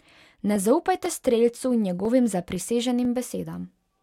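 A speech recording with periodic USB or driver dropouts: about seven tiny gaps at a steady 0.5 s interval, from 0.06 s to 3.55 s. Each skips roughly half a millisecond of audio, heard as regular ticks over the signal, pointing to a background task repeatedly stalling the audio path.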